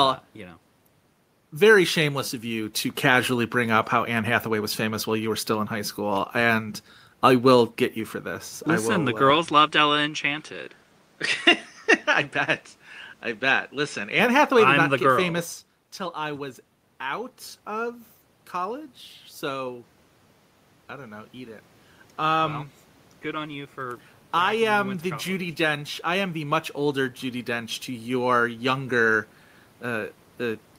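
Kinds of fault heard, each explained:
Input switched to a poorer device: From 9.30 s to 14.19 s the speech loses all content above 10 kHz and turns duller and narrower, then the full band returns. Both transitions are abrupt, with no silence at the switch and no noticeable change in loudness. A different background noise floor appears during that stretch, sitting about 35 dB below the speech. The likely cause is the system moving to another, band-limited microphone or headset input and then back.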